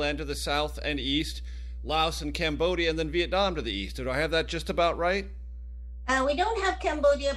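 From start to finish, a steady 60 Hz mains hum sits under the speech, roughly 10 dB below it and so clearly audible in every pause. Power-line current has leaked into the signal, most plausibly through a ground loop or a nearby transformer. It is heard as a fixed, pitched drone, not a shifting, unpitched rumble from wind or handling, and its 60 Hz fundamental marks a 60 Hz mains supply rather than a 50 Hz one.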